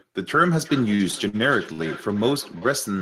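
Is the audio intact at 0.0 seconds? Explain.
Yes, the speech is intact at 0.0 seconds, with no audible fault at that moment.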